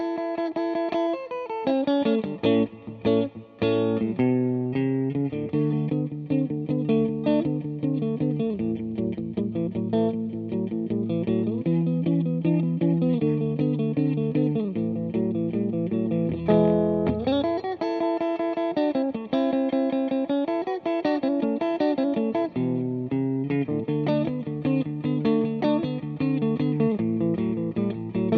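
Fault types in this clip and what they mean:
No audible faults turn up anywhere in this recording.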